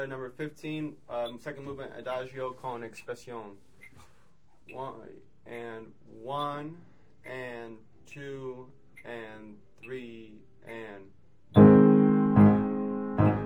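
Throughout the clip there is imaging from linear upsampling, which points to a 24 kHz original raised to 44.1 kHz by straight-line interpolation. The top end is dulled, and a faint mirrored copy of the spectrum, about 50 dB down, sits between 12 kHz and 24 kHz, adding a slight metallic shimmer. On a spectrogram, that copy appears as a pale reflection above 12 kHz.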